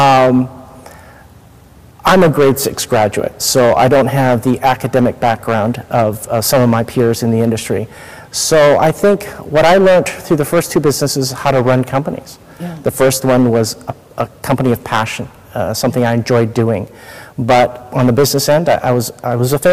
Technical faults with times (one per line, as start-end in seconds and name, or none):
0.00-19.73 hard clipping